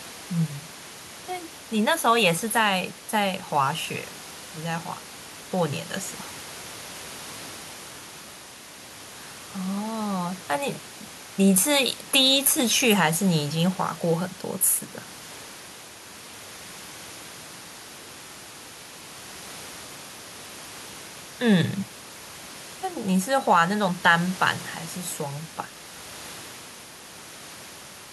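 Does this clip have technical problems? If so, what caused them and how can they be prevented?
No, nothing here needs fixing: the only thing in the background is the room's own noise, sitting about 21 dB below the speech, and that's just part of the recording rather than a fault in the system.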